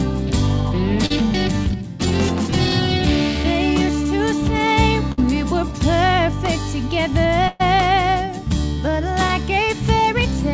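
Audio carried over a call path with nothing above 8 kHz, which fits G.722 at 64 kbps, shows two kinds of fault. Short concealed packet loss occurs at 1.06 to 1.12 s (about 40 ms filled), 3.42 to 3.46 s and 9.27 to 9.31 s (about 20 ms each). In each case a few hundredths of a second of audio failed to arrive in time, and the receiver bridged the hole by extending the preceding sound, pitched if it was voiced or as shaped noise if not, before blending back into the real audio. The result is a brief smear or wobble at each point, and a short sound falling inside the gap can disappear. A burst of packet loss occurs at 5.12 to 5.20 s, where 56 ms was filled against 60 ms missing, and at 7.48 to 7.61 s, where 119 ms was filled against 120 ms missing with no silent stretch. Here the concealment ran longer, continuing the last sound while lowering its level, so it becomes a held buzz or a fading hiss. 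The audio then resumes further on, with the lost portion simply absent.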